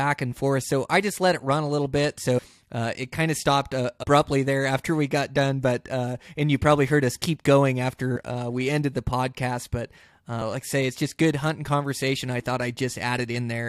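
Speech with compressed frames skipped at 2.37–2.39 s after "run a little bit" (roughly 150 ms lost), 4.02–4.04 s after "kind of stopped uh" (about 70 ms), and 8.15 s before "we ended the podcast" (about 100 ms). Missing or rejected frames make the audio jump ahead.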